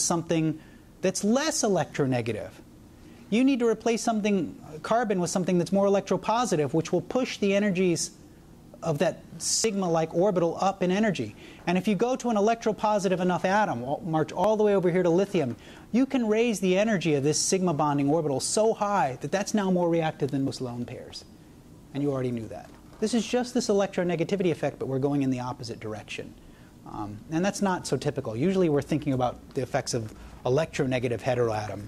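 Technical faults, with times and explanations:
9.64 s, 14.44 s and 20.48 s, dropped buffer (overrun): the software likely failed to read its samples before the hardware overwrote them, so roughly 20 ms, 20 ms and then 40 ms of audio are lost. The two sides are spliced together with no silence, producing an abrupt jump ahead in the sound.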